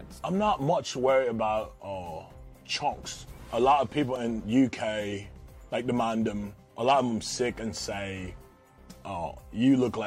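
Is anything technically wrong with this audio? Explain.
Yes. At 4.16 s, new audio failed to reach the output in time, so the device replayed its last buffer four extra times. This is a repeated buffer. Each repeat lasts only about 1.45 ms, which fits a 64-sample buffer, so it sounds like a click or brief buzz rather than a stutter, with essentially no audio lost.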